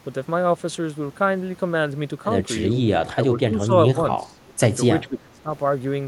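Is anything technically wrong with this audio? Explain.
Yes. An echo canceller likely mistook simultaneous talk from both ends for its own loudspeaker echo and turned the talker down. The result is speech suppressed in double talk: the speech dips by about 10 dB at 3.14–3.18 s, 3.34–3.73 s and 3.93–4.39 s, and by about 15 dB at 5.01–5.49 s.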